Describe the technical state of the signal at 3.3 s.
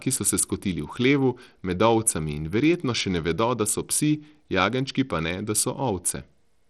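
At 3.3 s, as across the whole clip, the speech has likely passed through Bluetooth SBC compression with a small bit pool, consistent with about 80 kbps, so the upper sub-bands get few bits. Plainly audible: flickering, thinned treble with gritty, aliased noise on the speech.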